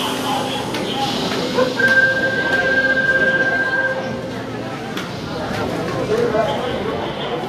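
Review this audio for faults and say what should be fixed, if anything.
The whole clip has a hissy, grainy top end, with roughened tones and softened attacks, and nothing above 14.2 kHz. That's likely Vorbis compression at a low setting, which fits something around 36 kbps, where the codec quantises the treble so coarsely that fine detail turns into noise. Re-export from the original source at a higher Vorbis quality, or use a lossless format.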